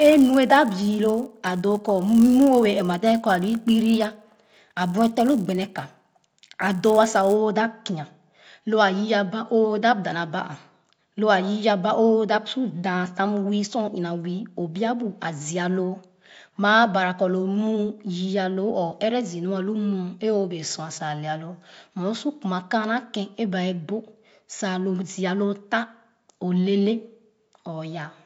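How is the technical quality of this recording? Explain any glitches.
The recording has one glitch, confined to the opening seconds. From 0 to 7.35 s, ending just before "da kia", the resampler restarted on every block. Each 10 ms block was converted from 16 kHz to 48 kHz in isolation, so every block edge carries an error. This produces a 100 Hz buzz under the speech. On a spectrogram it shows as vertical lines every 10 ms, and in the waveform as small steps at the block edges.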